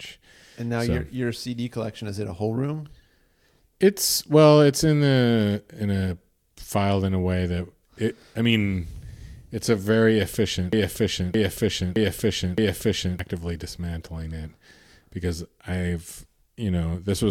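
A broken-record loop runs from 10.73 s to 13.19 s, just after "it's a very efficient". A fragment of about 0.62 s repeats exactly, back to back, four times, so the speech stutters on an identical scrap instead of moving forward. The likely cause is a player or stream stalling and re-sending the last chunk it held. Whatever should have been heard in that span is gone, and normal playback resumes at "dismantling it".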